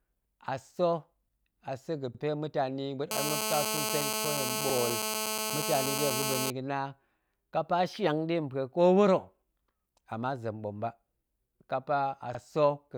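Overlapping chunks first appear at 2.15 s, just after "a sa̱". The speech was handled in 2.5 s blocks, and each block begins about 50 ms before the previous one finished, so that 50 ms slice plays twice at the seam. The result is a brief stutter with a click-like edge, recurring on a strict 2.5 s grid at 2.15, 4.70, 7.25, 9.80 and 12.35 s. The 7.25 s join falls just before "kapa shiang nɗe mpue", and the 9.80 s join falls just before "ama zem ɓom ba".

GSM phone buzz runs from 3.11 to 6.50 s. A nearby 2G handset in an active call is emitting radio bursts at about 217 per second, and the audio circuitry is rectifying those pulses into the signal. This produces a hard, rasping 217 Hz buzz rich in harmonics that stays nearly steady, sitting at about 2 dB below the speech. That makes it loud enough to compete with the speech itself, and the 4.70 s chunk stutter falls inside it.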